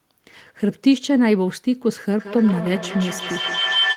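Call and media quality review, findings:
Feedback howl, 2.19 s to end: tone near 3 kHz builds, loop repeating around every 150 ms, peaking about 3 dB below speech. Acoustic loop between two devices in one room. Spectrogram: narrow bright horizontal band.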